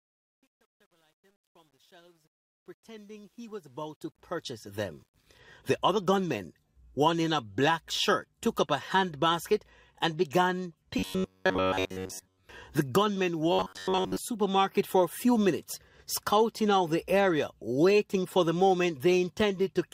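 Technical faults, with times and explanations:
0.0–5.39 s, truncation distortion on a fade: the fade-in was processed at only 10 bits with no dither, so its quietest stretch, worst from 0.0 to 3.5 s, collapses into coarse square steps. It sounds gritty until the level clears by 5.39 s.
10.99–12.44 s and 13.52–14.19 s, robotic sound from repeated short buffers: new audio likely arrived too seldom, so most of each stretch is short fragments of about 10.7 ms replayed. This forces a rigid, metallic 93.8 Hz buzz onto the sound.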